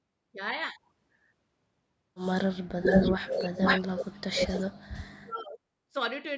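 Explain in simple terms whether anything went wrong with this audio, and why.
The speech dips sharply and cuts out in pieces from 2.63 to 2.89 s and through most of 3.17 to 5.62 s, with a brief dip at 5.91 s. This is likely speech suppressed in double talk: both sides spoke at once, and the echo canceller turned the talker down along with the echo.

A delayed copy of the voice, arriving about 0.47 s late, comes back from 2.83 to 3.8 s, briefly at 3.98 to 4.02 s, and again from 4.38 to 4.62 s, at times louder than the speech itself. This is likely an echo leak: a loudspeaker's sound reached the far side's microphone, wasn't fully removed, and was sent back.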